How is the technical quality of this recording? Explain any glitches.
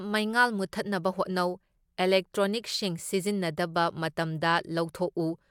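Listening closely, nothing in the recording stood out as a technical problem, so there are no glitches to explain.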